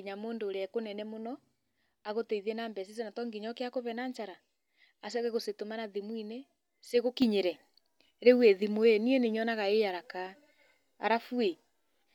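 A sudden gain jump at 7.22 s lifts this speech recording by about 6 dB in a single step, with the background noise rising along with it and staying at the higher level to the end. The likely cause is a digital gain change applied without any ramp.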